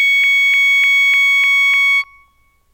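Seven skips in the music, at 0.24, 0.54, 0.84, 1.14, 1.44, 1.74 and 2.04 s, sound like audio missing between chunks. About a fifth of a second vanishes each time, likely as half-second chunks are closed and reopened. Unlike dropouts, there is no silence, only a regular 0.3 s jump.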